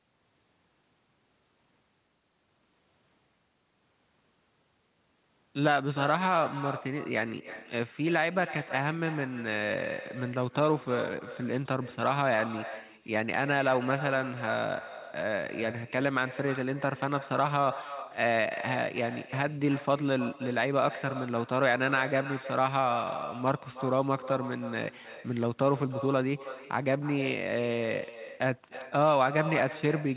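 From start to finish, every phrase of the speech is trailed by a fainter, thinner copy arriving roughly a third of a second later, at about 13 dB below the talker. This is echo with no canceller: the far end is playing the call through a loudspeaker, its microphone picks that sound up again, and nothing strips it out before it travels back. The band-limited sound of the call path, with nothing above 4 kHz, fits a G.711 mu-law connection, and the echo carries that same dull character.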